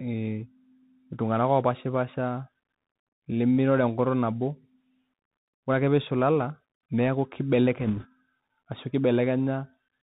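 Throughout, the speech carries the Bluetooth CVSD headset codec: a one-bit delta coder with adaptive step, cutting everything above 4 kHz, roughening s sounds and leaving granular hiss, unlike an ordinary low-pass. From 7.80 to 8.06 s, bit errors on the Bluetooth voice link, at around one percent, add rushing crackle rather than the sharp clicks of dropped packets.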